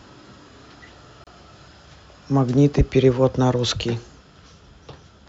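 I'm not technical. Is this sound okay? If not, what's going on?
No, there's a gap at a join of encoded pieces. At about 1.24 s the speech drops out for roughly 29 ms, then carries on where it stopped. The audio was encoded as separate chunks, about 4 seconds apart, and joined without trimming each chunk's built-in silent lead-in.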